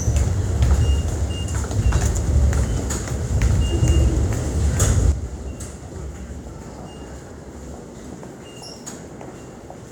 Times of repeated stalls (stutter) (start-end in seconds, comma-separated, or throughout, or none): none